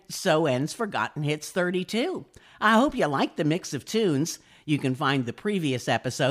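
No audible faults anywhere in the speech recording.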